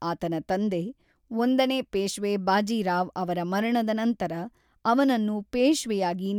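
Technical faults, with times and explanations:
No technical faults can be heard anywhere in the recording.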